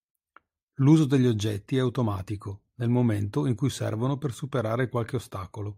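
Nothing in this speech recording stands out as a technical problem; there's no moment where the sound slips, breaks up or jumps.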